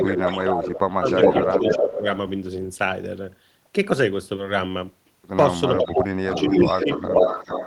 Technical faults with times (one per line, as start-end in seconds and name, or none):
0.00-0.42 echo leak
0.01-1.06 speech suppressed in double talk
1.09-1.93 echo leak
1.43-2.06 speech suppressed in double talk
5.73-7.66 echo leak
5.78-6.89 speech suppressed in double talk